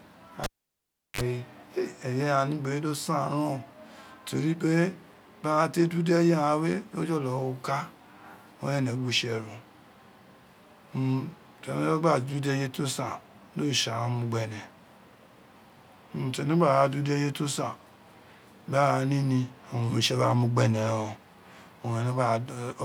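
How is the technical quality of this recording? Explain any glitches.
The recording has one clear glitch, near the start of the speech. A cable pulled and plugged in from 0.44 to 1.21 s: the live lead comes out with a pop, the signal drops to near silence for about 0.72 s, then a 43 ms burst of 50 Hz mains buzz sounds as only the plug tip makes contact, before a second pop brings the audio back.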